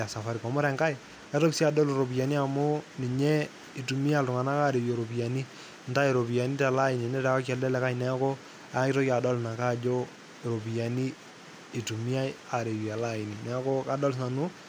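Nothing in the recording stands out as a technical fault; the speech carries on steadily with no interruptions or glitches at any point.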